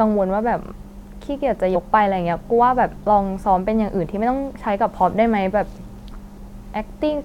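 At 1.74 to 1.76 s the speech jumps forward by about 50 ms, roughly two frames, and at 6.11 s it jumps again by about 200 ms, around seven frames. Both are compressed frames skipped: whole frames were lost from the file or rejected by the decoder as damaged, so playback resumes further on. The jump sizes point to a 23.2 ms frame.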